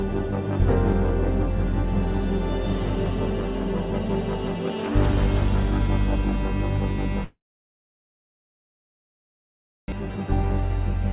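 At 7.24 s the audio cuts out, and it stays gone until 9.94 s. This is a long network dropout, likely caused by packets that stopped arriving. For a brief moment the receiver stretches the last sound into a fading buzz. After that there is about 2.5 s of silence. When the audio returns, roughly 1.6 s of material has been lost for good, and the stream now runs around a second behind.

From 10.02 s to 11.12 s a jitter buffer speed-up follows. The buffer has gathered more audio than it wants, so the receiver trims tiny slices, each a pitch period or so long, again and again. Roughly 50 ms is removed in all. Playback runs about 4 percent fast while the pitch stays the same. All of it is heard through the narrow G.711 band that stops at 4 kHz.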